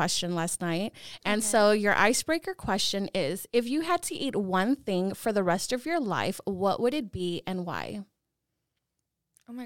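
No technical faults can be heard anywhere in the recorded speech.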